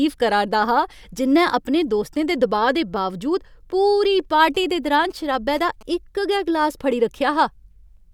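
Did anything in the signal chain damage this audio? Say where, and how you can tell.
Yes. From 4.55 s to 5.83 s the speech carries GSM signalling bursts, picked up in the analogue wiring: a galloping dit-dit-dit of short buzzes whose pulse rate sits at 217 Hz, roughly 25 dB below the speech. A nearby 2G phone's radio bursts were rectified by the analogue circuitry and became audible. Mains hum, by contrast, is a steady 50 or 60 Hz tone with harmonics. This fault comes in gated clusters, stops after about a second, and keeps that 217 Hz rhythm.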